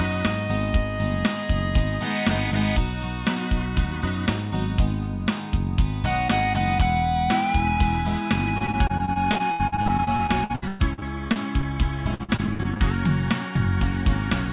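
From 8.58 to 11.64 s, and again from 12.14 to 12.82 s, the audio suffers repeated packet loss (robotic sound). Packets keep going missing, and each hole is filled by stretching the preceding sound before the next dropout arrives. In the first stretch, concealment covers about 27% of the time, with gaps up to 114 ms. In the second, it covers about 35%, with gaps up to 58 ms. The result is choppy, with pieces missing, over a band that stops at 4 kHz, which fits a G.711 mu-law call path.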